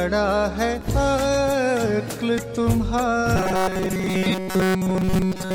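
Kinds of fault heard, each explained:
Robotic sound from repeated short buffers: new audio likely arrived too seldom, so playback looped a fragment of about 5.3 ms and skipped most of the real signal. From 3.36 s onward, a rigid, metallic 188 Hz buzz is imposed on the sound.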